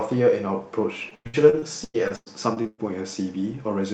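From 1.09 s to 2.80 s the speech breaks up with repeated packet loss, giving a robotic sound. Eleven separate holes fall in this stretch, the longest about 115 ms. Each hole is bridged by stretching the last good sound forward, and the next loss arrives soon after. Over a third of the span ends up patched this way. The speech turns choppy, with pieces dropped. Above it, the call path's 8 kHz band limit dulls the top end.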